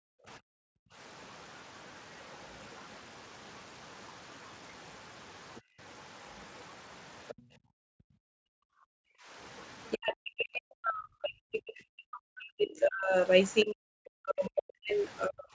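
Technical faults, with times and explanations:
0.0–0.27 s, 0.92–0.96 s, 5.61–5.79 s and 7.42–9.3 s, background gated by the echo canceller: the canceller clamped the microphone while the far end played, so room sound drops by about 40, 8, 32 and 40 dB.
0.56–0.64 s and 9.93–15.49 s, speech suppressed in double talk: the canceller likely mistook overlapping talk for echo and turned the talker down deeply, briefly at first, then across the final stretch.
5.55–5.61 s and 7.28–7.42 s, other side's voice leaking through: echo cancellation likely left residue from the loudspeaker, so a second voice comes through, very faint then stronger.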